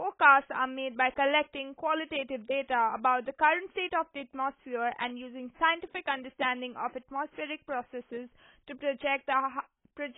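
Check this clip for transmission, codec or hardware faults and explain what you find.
There is one codec fault, and it runs through the whole clip. It is AAC compression, likely AAC-LC at a very low bitrate. The heavy damage fits something near 16 kbps. The encoder quantises each frame of frequency lines against a hearing model. With so few bits, it discards fine detail and cuts off the top. Nothing remains above 3.8 kHz. The speech sounds dull and muffled. Sibilants turn fizzy and smeared, and held sounds warble.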